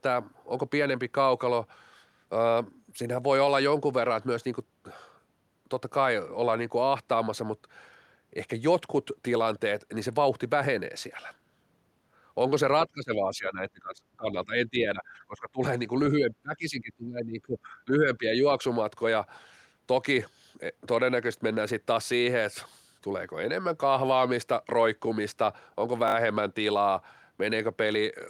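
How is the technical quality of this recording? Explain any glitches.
The recording has two kinds of glitch: the speech sinks in level twice in the middle, and there is a brief stutter near the end.

Speech suppressed in double talk, 12.86 to 15.61 s and 16.16 to 18.44 s. The voice drops by roughly 25 dB and then about 20 dB. An echo canceller likely could not separate this side's talk from the overlapping far-end echo and pulled both down.

Repeated buffer, 26.08 to 26.14 s. A short slice of speech plays four times in a row with hard joins, which fits a buffer of about 20 ms replayed because fresh audio arrived late. It sounds like a quick stutter, with little or nothing actually missing.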